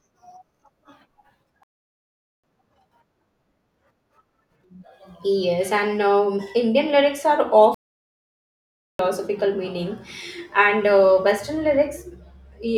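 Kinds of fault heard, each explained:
Playback stall: the speech cuts to silence twice, for about 0.8 s and 1.2 s, then resumes, likely because the player ran short of data.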